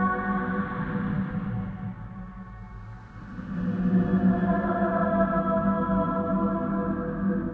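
No faults are audible; the sound comes over a call path with nothing above 8 kHz, which fits a wideband codec such as G.722 at 64 kbps.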